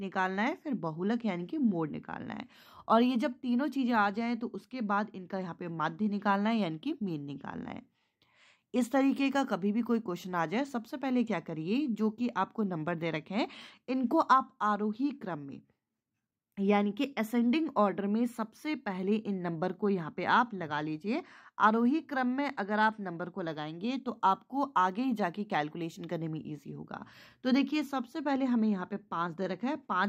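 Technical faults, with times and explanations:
Nothing stood out on listening to this recording.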